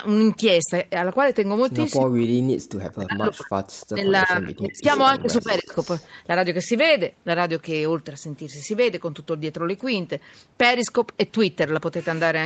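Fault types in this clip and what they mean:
Speech suppressed in double talk: the voice dips sharply while both sides talk, by about 40 dB from 1.99 to 4.86 s and about 20 dB around 5.2 to 5.7 s, likely from echo-canceller suppression.
Echo leak: a delayed copy of the voice, 310 ms behind, leaks back at 3.8 s, 4.78 to 5.18 s and 5.81 to 6.09 s, likely from incomplete loudspeaker echo cancellation.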